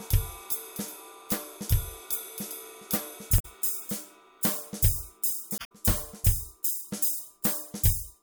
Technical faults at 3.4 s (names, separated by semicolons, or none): damaged data in a compressed stream